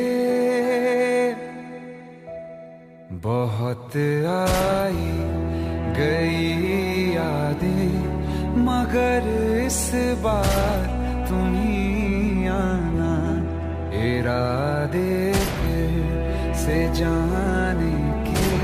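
No dropouts, clipping, glitches or other transport or processing faults are audible anywhere in the clip.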